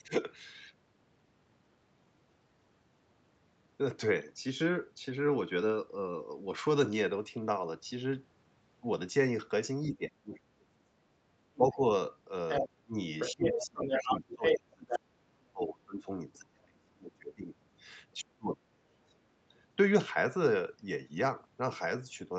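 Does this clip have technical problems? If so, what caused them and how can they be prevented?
Yes. Two related faults occur while both ends of the call are talking.

Speech suppressed in double talk affects 9.91 to 11.82 s, 12.85 to 17.54 s and 18.23 to 19.23 s. The talker's level sinks by about 30 dB, about 25 dB and about 30 dB at its deepest, so roughly five and a half seconds in all sound ducked or broken into fragments. The likely cause is an echo canceller that cannot separate the local talker from loudspeaker echo and so turns both down. What distinguishes this from packet-loss dropouts is that the dips track the moments when the other voice is present. A headset, or a canceller tuned for full-duplex double talk, would prevent it.

The other side's voice leaking through appears in three places:
at 11.55 to 11.77 s as a faint scrap about 25 dB below the talker,
from 12.49 to 14.99 s at roughly the same level as the talker,
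and at 16.33 to 16.38 s as a tiny fragment about 35 dB down.

Unlike a separate person talking in the room, this second voice arrives in or around the stretches where the suppression is acting, likely because it is loudspeaker playback the canceller failed to remove. Lower speaker volume, more distance between speaker and microphone, or a headset would prevent it.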